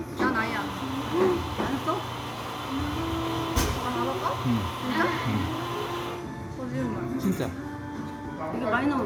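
No technical faults are audible anywhere in this recording.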